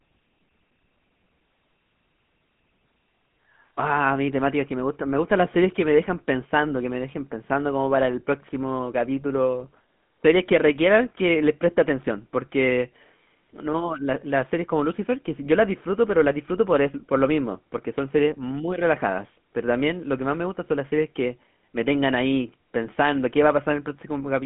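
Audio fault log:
Throughout, GSM full-rate codec: the speech is confined to a narrow telephone band of roughly 150 Hz to 3.5 kHz, with nothing above 3.7 kHz, and carries a plainly audible buzzy, gravelly roughness from pulse-driven vocal-tract modelling at what sounds like 13 kbps, unlike the smoother muffling of plain band-limiting.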